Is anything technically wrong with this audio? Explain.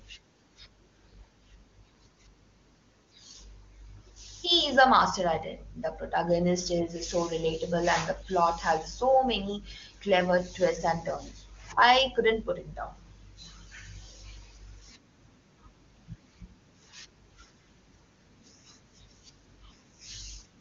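No, nothing in this speech clip is technically wrong. It has the band limit near 7 kHz typical of AMR wideband (HD Voice) coding, and the speech sounds clear, which fits the codec's top rate of around 23.85 kbit/s.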